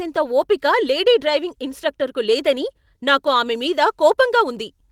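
No technical faults can be heard anywhere in the recording. Nothing in it calls for a timestamp or a repair.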